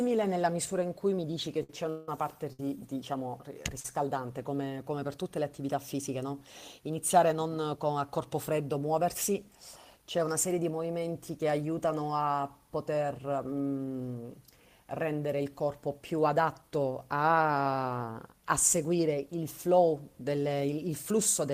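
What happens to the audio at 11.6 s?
Nothing goes wrong at 11.6 s; the speech carries on intact through that moment, with no dropout, click, distortion or other audible fault.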